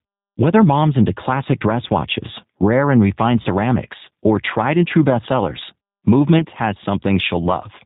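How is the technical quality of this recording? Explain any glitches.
The quality is fair at best: it's listenable but clearly telephone-grade, with two brief dropouts.

G.729 codec, throughout: everything above 4 kHz is gone, and the speech has that slightly rough, synthetic edge you get when a vocal tract filter plus a few pulses per frame rebuilds the voice. The damage is plainly audible and fits an 8 kbit/s G.729A stream.

VoIP packet loss concealed by the speech codec, at 3.42–3.48 s and 6.39–6.45 s: the decoder filled each gap by stretching its last pitch and filter with falling gain, so you hear a short buzzy or noisy, fading smear. The first gap fits about 30 ms of lost audio and the second about 10 ms. Each frame builds on the last, so the voice stays weak or distorted just after each one.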